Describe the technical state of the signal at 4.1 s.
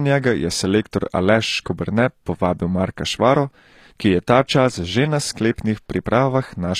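At 4.1 s, as throughout, the speech carries plainly audible HE-AAC compression, likely near 24 kbps. Treble copied up from lower bands, with nothing above 14.9 kHz, makes s sounds gritty.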